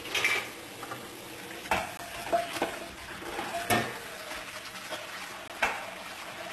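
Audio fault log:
Throughout: HE-AAC compression. The treble has a synthetic, gritty sheen, and nothing sits above 12.3 kHz. The likely cause is spectral band replication. The encoder keeps only the lower spectrum and fills the upper region by copying lower bands upward under a coarse envelope, so the highs stay bright but their harmonics don't line up with what lies below. The damage is plainly audible and fits a bitrate of around 16 kbps.
1.97 s and 5.48 to 5.50 s: block of digital silence. Each time, the sound drops abruptly to silence and returns with no fade. The first hole, about 17 ms, comes across as a short hole. The second, 20 ms, is a brief dropout heard as a hole. Both point to the output buffer not being filled in time, which fits a block of roughly 17 to 20 ms.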